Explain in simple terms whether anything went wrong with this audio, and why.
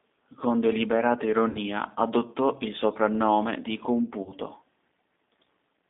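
Two things went wrong.

The whole recording passed through the G.729 codec, a compression method built for internet phone calls. It doesn't store the real sound. It stores a rough description of the voice and rebuilds it at the other end. The rebuilt voice is clearly rough and slightly artificial. It is also squeezed into a narrow telephone band, roughly 250 Hz to 3.6 kHz, so it sounds thin and muffled, with no deep bass and no crisp top.

There is also VoIP packet loss concealed by the speech codec. Small pieces of the signal went missing in transit. The decoder filled each gap by stretching the last sound it had, fading it out. The first gap is from 1.49 to 1.59 s, just before "adottò il soprannome di". About 60 ms was lost there. The second is from 4.23 to 4.35 s, just after "adottò il soprannome di", with about 40 ms lost. The voice stays weak or distorted for a moment after each one.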